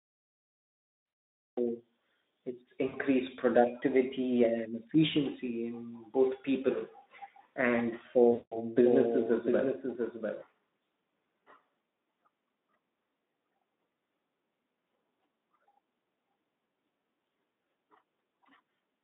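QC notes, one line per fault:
0.00–1.57 s, cut-off start: Digital silence, then the sound enters abruptly at 1.57 s mid-sound with no attack or fade. Capture or streaming began late, so whatever preceded that point was never recorded and the clip opens partway through the signal.
1.05–1.13 s, 2.88–2.96 s (before "productivity and efficiency") and 8.31–8.58 s, VoIP packet loss concealed by the speech codec: Each gap becomes a buzzy tone or coloured noise that sags in level, lasting 80 ms, 60 ms and 200 ms, which fits runs of 20 ms frames. The narrowband speech decoder filled the lost packets by extrapolating its last pitch and spectral shape while lowering gain, and recovery takes a little longer.
8.77–10.43 s, doubled audio track: A second full-band copy, about 5 dB quieter, trails the original by roughly 0.7 s with no room decay. It starts and stops abruptly. The likely cause is the same signal arriving a second time through a slower path.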